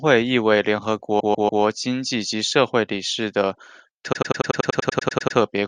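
A short run of compressed frames in this speech recording was sent or written more than once, a repeated-frames fault, so the decoder plays the same slice again. From 1.19 to 1.62 s a 144 ms block, consistent with about six frames, plays three extra times, a stutter that adds 432 ms. From 4.12 to 5.37 s a 96 ms block repeats thirteen extra times, a longer, faster stutter that adds about 1.25 s.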